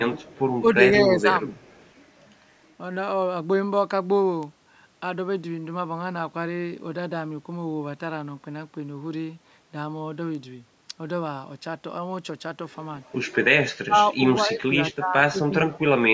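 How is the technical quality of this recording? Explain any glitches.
The recording has two kinds of call-processing fault, bunched near the start and end. The spectrogram stops around 8 kHz, from the call's microphone processing.

Speech suppressed in double talk, at 0.11–0.41, 0.62–0.76, 1.04–1.44, 13.82–14.21, 14.47–14.75 and 14.94–15.89 s: likely an echo canceller ducking speech during overlap. The voice dips by up to about 30 dB, shown as waveform notches and faded spectrogram bands.

Echo leak, at 1.53–1.9 and 14.90–14.94 s: likely residual loudspeaker echo returning 220 ms late, about 35 and 25 dB below the speech. On the spectrogram it appears as a weak, delayed copy of the voice's harmonics.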